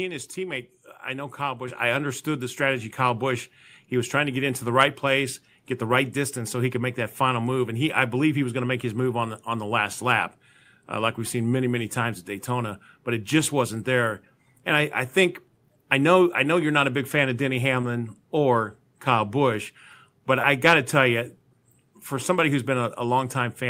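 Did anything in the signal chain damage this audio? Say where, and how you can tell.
Yes. Microphone volume stepped up at 1.68 s, just before "I understood the strategy". Call processing raised the input gain about 7 dB in one step, lifting voice and background together.

Short concealed packet loss at 17.81 s and 20.41 s, the second before "got to tell you". Each time, 20 ms was lost in the network, and the decoder bridged it with a brief smear.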